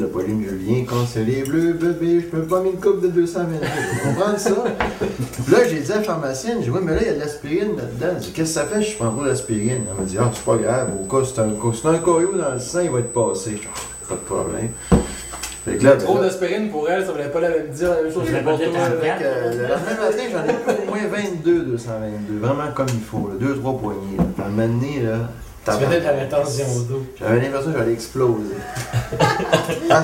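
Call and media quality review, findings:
USB whine, 8.49 to 15.87 s: steady 8 kHz tone, fairly loud, roughly 10 dB under the program. Probably a USB audio interface or its power/ground path picking up the 125 microsecond microframe current draw. Worth checking cabling and grounding.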